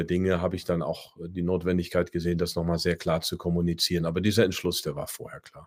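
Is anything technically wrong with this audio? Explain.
No, nothing in this speech recording points to a technical fault. There is no event at any moment of the clip that calls for a time, a mechanism or a repair.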